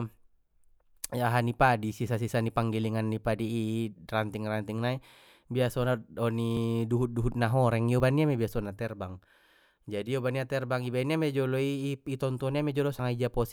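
A speech recording with three abrupt skips, at 6.57 s, 8.0 s and 12.99 s, each heard as the sound jumping forward. About 20 ms vanishes at the first two and about 40 ms at the last, with no gap left behind. The likely cause is a dropped buffer (overrun): the capture software fell behind and audio was overwritten before it was read. On a waveform each point shows as a sudden discontinuity, and on a spectrogram as a thin vertical broadband line.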